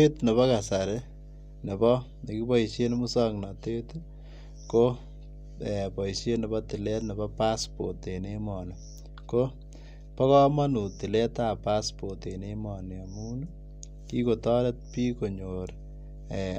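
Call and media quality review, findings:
Mains hum throughout the speech. Steady low tone at 50 Hz, fairly prominent, roughly 15 dB below the speech. Probable component: ground loop or nearby transformer. Power-line energy coupling into the signal path ahead of capture.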